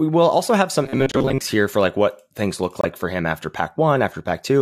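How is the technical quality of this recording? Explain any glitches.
The recording has two kinds of glitch: a stretch of robotic, buzzing speech early on, and two short dropouts to silence.

From 0.83 to 1.41 s the speech turns into a rigid, metallic buzz pitched at about 134 Hz. It still roughly tracks the syllables, but the natural voice character is gone. This is robotic sound from repeated short buffers, most likely because fresh audio was arriving too slowly. The playback side filled each gap by replaying a tiny slice of recent audio, about 7.5 ms long given the buzz frequency, while the real material was skipped. Roughly half of the stretch consists of these repeats. Looping a slice that short imposes its own fixed tone on the sound.

At 1.12 s (about 36 ms, inside the buzzing stretch) and again at 2.81 s (about 41 ms), the sound cuts abruptly to silence and then resumes. Both are a corrupt frame muted. 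Damaged bits made a compressed frame undecodable, so the player substituted silence for it. Each gap is consistent with one lost frame, and the timing around both holes stays intact.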